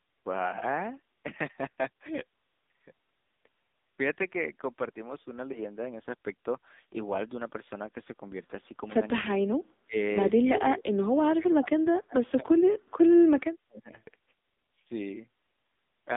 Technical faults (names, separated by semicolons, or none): AMR narrowband mobile codec; speech suppressed in double talk